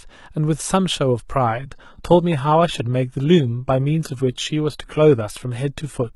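At 1.47 s the speech drops abruptly to a lower-bitrate adaptive stream, likely HE-AAC near 16 kbit/s. Treble turns thin and synthetic until the end, without any gap.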